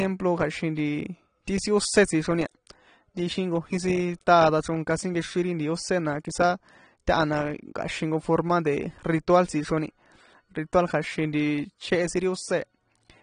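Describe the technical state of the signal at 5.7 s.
At 5.7 s the speech carries AAC compression damage, present throughout the clip. Nothing remains above 9.7 kHz, and bands are coarsely quantised, giving a dull, smeared sound with fizzy sibilants. The plainly audible damage is likely from AAC-LC at around 32 kbps.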